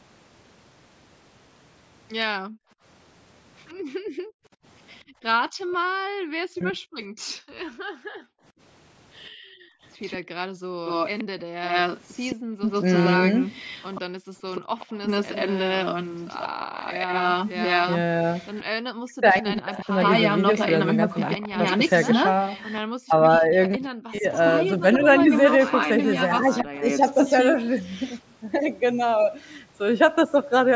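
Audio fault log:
2.38–14.76 s, background gated by the echo canceller: the room sound repeatedly dips, falling by up to about 40 dB and vanishing for around five seconds in total. The echo canceller clamped the microphone while the far end's loudspeaker was playing, releasing it between bursts.
3.68–5.76 s and 9.24–28.2 s, echo leak: a delayed copy of the speech trails it by 130 ms, faint at first, about 30 dB down, then much stronger from 9.24 s at about 5 dB below the speech. This is likely loudspeaker sound that the canceller failed to fully remove.
6.47–6.81 s and 18.76–26.84 s, speech suppressed in double talk: the talker's speech sinks by roughly 40 dB or breaks up, briefly at first, then for about two seconds in pieces across the later span. Overlapping talk likely kept the canceller from telling speech from echo.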